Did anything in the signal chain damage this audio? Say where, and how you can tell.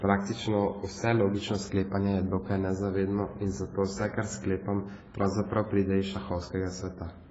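Yes, at the codec stage, throughout the speech. The band stops dead at about 7.7 kHz, and what remains is dull and smeared, with a warbling, fizzy texture on sustained vowels and sibilants. That pattern points to AAC compression, likely AAC-LC at a low rate near 16 kbps. With so few bits, the encoder drops the top band, quantises the remaining frequency lines coarsely against its masking model, and leaves gaps or noise-filled bands that shift frame to frame.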